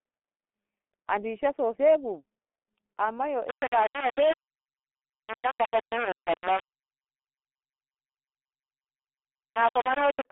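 Throughout, the speech carries heavy G.723.1 codec damage. Nothing passes above 3.7 kHz, the band sits at 250 Hz to 3.5 kHz, and the sound is muffled and hoarse with smeared consonants. This points to a rate near 6 kbit/s, where the slow 30 ms frame updates cannot track fast changes.

From 3.49 s to 10.25 s, a coarse grainy distortion rides on the signal and shifts with it, with the error roughly 10 dB below the level. Quiet stretches sputter or drop out. This fits low bit depth without dither, likely rounding to about 3 bits.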